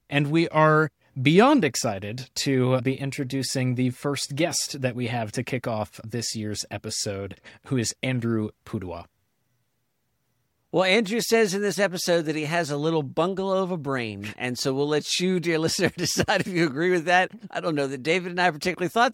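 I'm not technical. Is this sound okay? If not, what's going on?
Yes, nothing wrong turned up anywhere in this audio.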